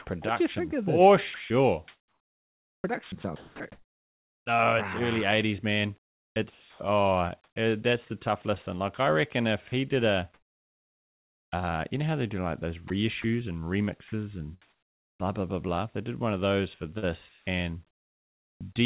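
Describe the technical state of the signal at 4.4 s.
At 4.4 s the audio is near the end of a choppy stretch from 0.22 to 4.46 s. It sounds like speech chopped by the voice detector. The sender likely toggled transmission repeatedly. About 2.2 s in total was replaced by comfort noise.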